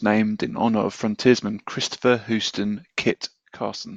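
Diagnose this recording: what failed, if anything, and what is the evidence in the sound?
One channel drops out at 3.12 s and stays gone to the end: the speech level falls abruptly by about 6 dB. The waveform envelope halves in a single step and the spectrogram darkens evenly across all frequencies. The likely cause is a lost stereo leg in analogue wiring, so the mono sum carries only one channel's contribution.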